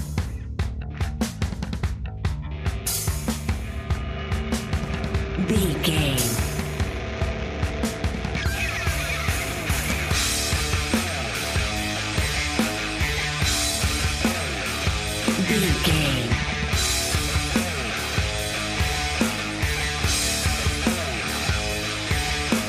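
Nothing in this one trips the ear; there's no dropout, glitch or distortion to point to anywhere along the way.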